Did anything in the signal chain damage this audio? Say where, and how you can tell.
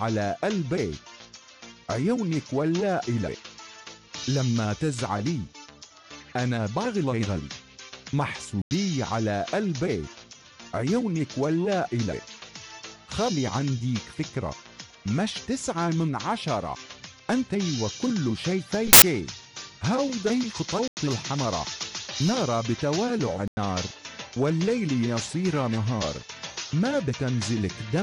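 Yes. The damage sits at the codec decode stage, after storage or transfer. There are corrupt frames muted at 8.62 to 8.71 s, 20.88 to 21.02 s and 23.21 to 23.57 s. Each gap drops abruptly to hard silence, and timing never shifts. The decoder rejected damaged frames, and the player filled silence.

A corrupt FLAC frame appears at 18.74 to 19.02 s. The decoded signal goes wrong, peaking around about -4 dBFS, then stops cleanly. Flipped bits fed the predictor wrong values, and no checksum caught them. The error ran until intact frames resumed.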